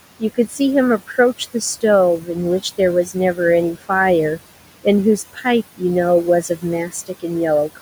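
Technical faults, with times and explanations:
Throughout: noise suppressor artifacts. The suppressor pulls the room noise down by about 17 dB wherever it decides there's only steady background. That noise sits about 16 dB under the speech, so you hear it dip in the gaps and swell back under the talking.
0.2–0.6 s, 2.2–2.29 s, 5.33–5.45 s, 6.43–6.64 s, 6.88–7.24 s: speech cut by the noise suppressor. In these spots the suppressor took quieter bits of speech for noise and turned them down along with the background, by about 8 to 16 dB at the deepest. Each time, about 100 to 150 ms of sound comes out swallowed or faint.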